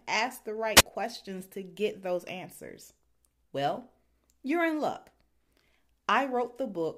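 At 0.76 to 0.82 s the analogue radio link from the wireless microphone weakens until the receiver's squelch cuts the output, a wireless microphone squelch dropout. The speech gives way to a brief surge of hiss, then a gap of near silence lasting about 4.4 ms, before it comes back.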